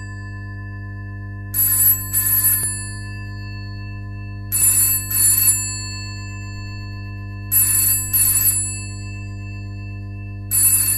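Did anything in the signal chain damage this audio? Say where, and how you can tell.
Yes. Mains hum sits in the analogue wiring: a steady 50 Hz tone roughly 10 dB under the sound throughout, typical of a ground loop coupling power-line current into the signal.

The second fault happens during streaming delivery: there's an overlap between stream segments, heard as tiny skips at 2.63 s and 4.62 s. Overlapping timestamps made the player trim about 5 ms and 14 ms of real audio, which fits 2-second segments.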